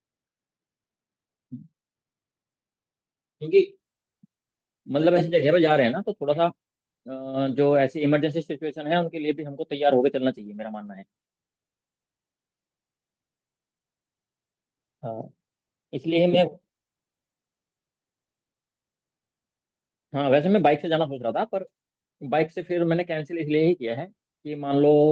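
Nothing goes wrong anywhere in this bit of speech; it just comes through a WebRTC call path, with the softened top end you'd expect from a call codec running at a modest bitrate.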